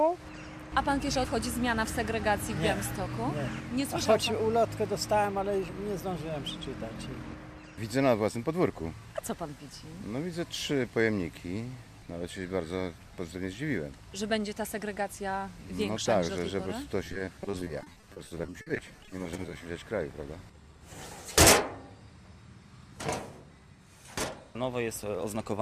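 From 17.04 to 19.66 s, repeated packet loss (robotic sound): dozens of holes up to 50 ms, patched by extending prior sound, give choppy sound with pieces missing rather than one clean dropout.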